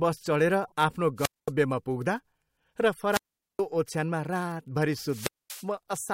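At 0.64 to 0.72 s, damaged data in the compressed stream makes the decoder lose frame sync, giving a short glitch. Wireless microphone squelch dropouts follow at 1.17 to 1.52 s, 3.10 to 3.62 s and 5.03 to 5.71 s. Each time the fading radio signal brings up hiss, then the receiver's squelch cuts the output to near-flat waveform holes of 0.22 s, 0.42 s and 0.23 s.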